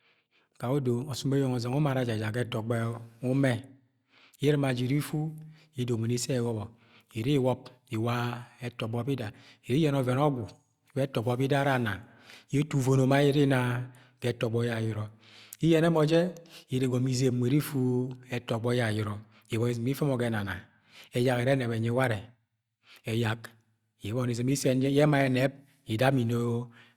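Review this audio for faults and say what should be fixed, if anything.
Nothing here needs fixing, as the speech comes through without any fault to flag.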